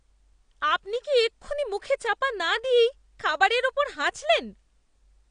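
Throughout, the speech sounds dull and smeared, with nothing above 9.8 kHz: plainly audible damage, likely AAC compression at a bitrate around 32 kbps.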